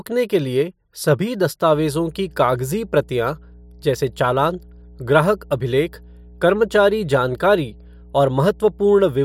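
Right after "के लिए सभी", at about 1.72 s, a steady 60 Hz mains hum kicks in and runs to the end of the clip. It's the classic sign of power-line interference leaking into the signal path, most likely from a ground loop or a transformer sitting too close to the cabling. It sits roughly 25 dB under the speech, so it's a constant low drone under the talker.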